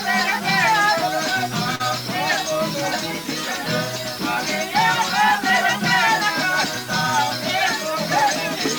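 From start to finish, the audio was most likely rounded to a very coarse scale, about 5 bits, with no dither to break up the steps. Because the rounding error tracks the waveform rather than sitting as a steady hiss, the result is a grainy, buzzing distortion around 20 dB below the signal that shifts with every change in the sound. Quieter stretches turn harsh and gritty, and the faintest parts sputter or collapse toward silence. This low bit depth without dither sits under everything else in the clip.

At 1.75 to 1.82 s comes a short concealed packet loss. Roughly 40 ms of audio never arrived in time, and the receiver filled the gap with about 42 ms of synthesised continuation, extending the preceding sound's character before crossfading back into the real stream. The patch comes across as a brief smear or wobble, a moment where the sound stalls and slides rather than moving on.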